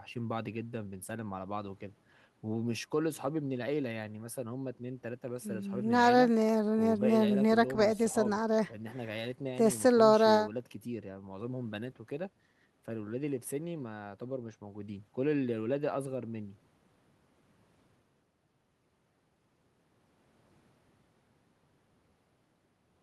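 No technical faults are audible.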